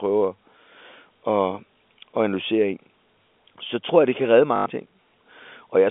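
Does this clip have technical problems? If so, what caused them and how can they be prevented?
Yes. Packet loss with the last packet repeated occurs at 4.56 to 4.66 s. About 100 ms went missing, which fits five 20 ms packets, and the receiver replayed the last good packet until new audio arrived. The replays seldom line up with the pitch, and the run buzzes at 50 Hz, a short robotic stutter. To prevent it, cut network loss with QoS prioritisation or forward error correction, and use a receiver with proper packet loss concealment instead of plain repetition.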